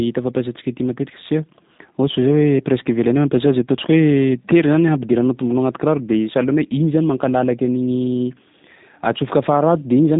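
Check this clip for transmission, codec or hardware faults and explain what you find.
One fault runs through the whole recording: the speech has passed through a G.729 codec, whose damage is plainly audible. The encoder discards the waveform and keeps only a vocal tract filter, a pitch predictor and a sparse set of pulses for each short frame, at a rate consistent with 8 kbit/s. The decoder rebuilds speech from that model, giving a slightly rough, synthetic texture. Nothing above about 3.8 kHz survives, so the sound is narrowband and muffled.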